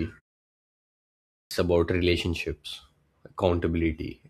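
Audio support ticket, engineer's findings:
Clipped start after a pause, 1.40–1.51 s: first 110 ms of "about relationships" swallowed after a 1.28 s silence. Output device sleeping in silence, slow to wake and relock.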